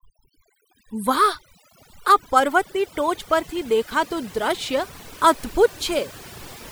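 A speech recording with overdone noise removal throughout: the pauses sink to near silence dotted with twinkling specks, and the voice loses its quieter bands as they are pulled down with the noise. Unlike a noise gate, nothing snaps open or shut between phrases.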